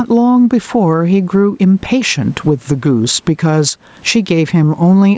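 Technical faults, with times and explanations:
Throughout, gain pumping: the input gain is likely set far too high for the microphone, so a fast limiter clamps down on each loud stretch of speech and lets go in the pauses, swinging the level by around 10 dB. The room noise sits about 42 dB below the speech. Loud and soft passages are pressed toward one level, giving a breathing, squashed sound.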